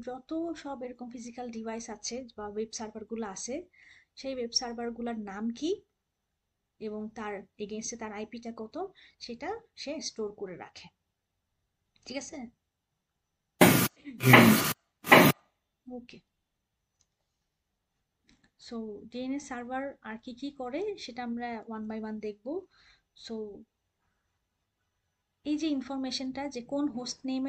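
At 13.59 s there is pre-echo: a hiss about 17 ms long, about 25 dB above the quiet before it, smears a sharp attack. The codec stayed in long blocks, consistent with a 26 ms window. Unlike echo, the noise arrives before the hit.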